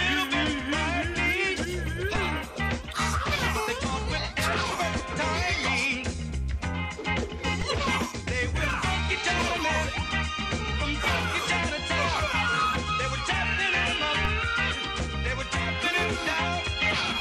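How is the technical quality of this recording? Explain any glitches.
Two kinds of glitch are audible: one short burst from a damaged compressed frame, and two low thumps from shifts in the waveform's zero line.

Corrupt frame decoded, 4.98 to 5.01 s: a couple of consecutive compressed frames had flipped bits, and the decoder played them rather than concealing them. Misread gain values and spectral codes place energy at frequencies where none belongs for the span of those frames. The result is a brief chirp-like burst of noise lasting roughly 20 ms, peaking at around -15 dBFS.

DC step, at 7.62 s and again at 14.25 s: the waveform's baseline abruptly jumps to a new offset, as happens when a converter recalibrates or an offset-carrying input is switched into the path. Each jump is heard as a low thump or click while the program itself carries on unchanged. The offset does not persist. It drains away with the behaviour of a 20 Hz high-pass, so each thump dies out within a fraction of a second.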